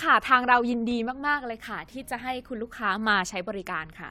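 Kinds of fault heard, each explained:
No kinds of fault are heard in this speech clip.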